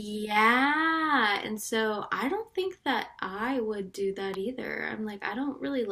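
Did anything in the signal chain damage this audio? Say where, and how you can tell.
Yes. There is an electrical switching spike at 4.34 s, in the speech. It is a sharp snap or tight cluster of clicks, only a few milliseconds long, peaking at about -20 dBFS. It sits on top of the speech rather than replacing it. The stage is the analogue wiring before the converter. The likely cause is a nearby switch, motor or static discharge arcing briefly. The cable picked up that burst of energy as a transient click.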